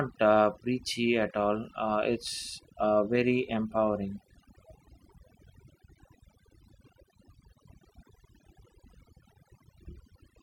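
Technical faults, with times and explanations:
Throughout, overdone noise removal: the denoiser's been cranked way too hard, so any frequency band sitting near its noise estimate gets pulled right down or shut off. The quieter parts of the speech vanish along with the background noise, leaving near-silent gaps full of twinkly specks.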